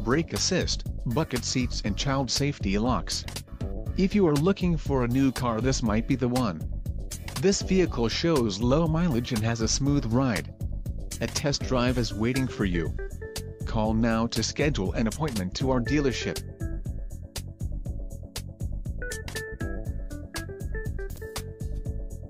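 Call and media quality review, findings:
Brief jumbled blip, 21.1–21.18 s: chunks out of order. One 20 ms chunk played three chunks late, after its successors, so nothing is missing but the sequence scrambles across three hard joins. Probable component: jitter buffer or playout reordering.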